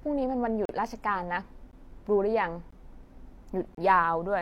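Gaps between stream segments break the speech at 0.65–0.69 s, 1.71 s, 2.71 s and 3.75–3.77 s, roughly once per second. Each segment's timestamp leaves a gap of about 16–38 ms before the next one, which the player fills with silence. These hard-edged dropouts add time, but no audio is lost.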